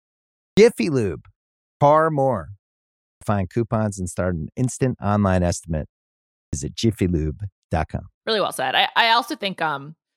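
Speech breaks in abruptly out of silence four times, each onset missing its first sounds: at 0.48 to 0.57 s, 1.71 to 1.81 s, 3.12 to 3.21 s (just before "find coupons and start"), and 6.44 to 6.53 s (just after "an instant online estimate"). This is a clipped start after a pause. During each preceding pause of 0.42 to 0.59 s, the output device dropped into sleep and needed time to wake, so roughly 88 to 98 ms of sound was swallowed each time.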